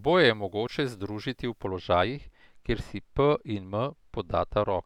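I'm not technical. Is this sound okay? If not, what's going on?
No. From 1.65 s to the end, the speech turns dull and muffled from de-emphasis applied wrongly, a treble cut that softens the highs gradually rather than chopping them off abruptly.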